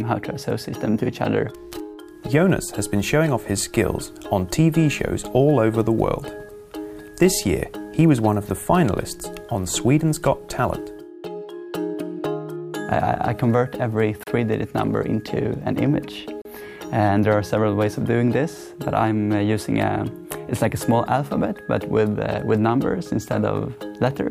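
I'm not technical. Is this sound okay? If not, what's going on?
No. Twice the audio program briefly failed to deliver sound, leaving a block of digital silence about 35 ms long at 14.23 s and 16.42 s, heard as a quick drop.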